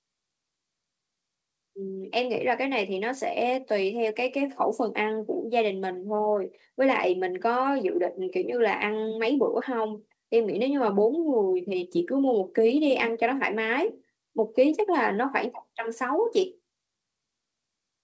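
Speech, with no technical fault to be heard anywhere in the clip. It has clearly passed through a call path, with nothing above 8 kHz, which fits a wideband codec such as G.722.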